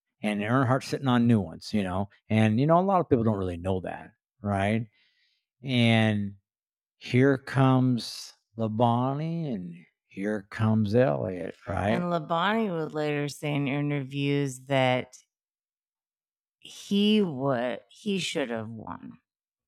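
A time-stretched section runs from 3.94 s to the end, straight after "people don't really know". The speech abruptly slows to 0.59 times its pace while pitch holds steady, so it drags, likely from software lengthening it by repeating short slices.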